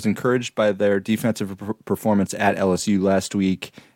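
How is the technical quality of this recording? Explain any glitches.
No technical faults are audible.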